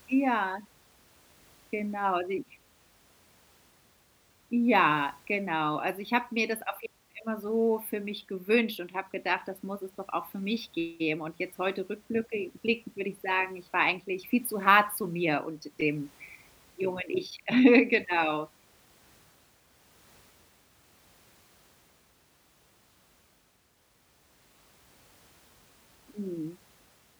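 Nothing goes wrong anywhere in this stretch of speech, so there's no technical fault to point to at any moment.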